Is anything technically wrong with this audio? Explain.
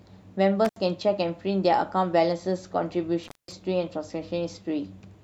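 Yes. The speech has two dropouts from an intermittent contact. The first runs from 0.65 to 0.77 s, with the line open for about 72 ms. The second runs from 3.24 to 3.52 s, open for about 206 ms. A loose plug or cable briefly breaks the connection. The sound cuts out and crackles as the contact opens and closes. Faint hiss remains in each gap. The second gap is clearly longer.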